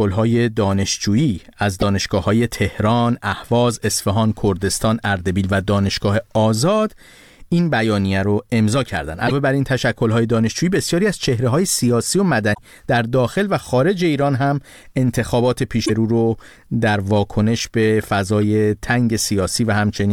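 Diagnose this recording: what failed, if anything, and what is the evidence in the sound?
Five brief glitches break through the speech: a tiny blip at 1.82 s, then longer bursts at 9.24 to 9.32 s, 12.50 to 12.59 s, 15.82 to 15.90 s, and 18.38 to 18.41 s. This is damaged data in a compressed stream, a codec-stage fault. Corrupted bytes in the encoded frames make the decoder misread them and lose frame sync, emitting garbage for a few tens of milliseconds until it locks onto the next valid header.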